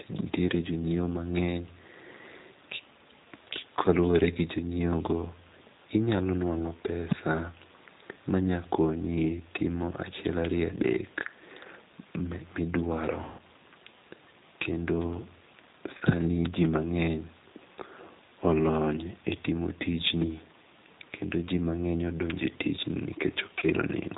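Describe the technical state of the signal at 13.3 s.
At 13.3 s the speech falls inside VoIP packet loss concealed by the speech codec, from 13.24 to 13.41 s. About 150 ms of packets are missing. The decoder stretches its last pitch and filter into a fading buzzy tone or coloured noise. The distortion lingers briefly after packets return.

The whole clip also carries the G.729 codec, which fits an 8 kbit/s stream. The speech sounds rough and synthetic, with nothing above 4 kHz.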